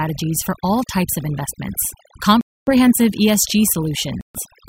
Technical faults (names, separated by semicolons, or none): overdone noise removal; Bluetooth stall